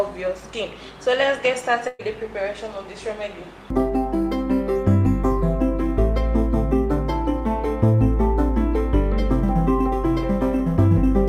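A burst of packet loss hits the sound at 1.87 to 2.02 s. Consecutive packets arrived too late or not at all, so the receiver extended the last sound for 116 ms, fading it down, then resumed with 120 ms of audio missing.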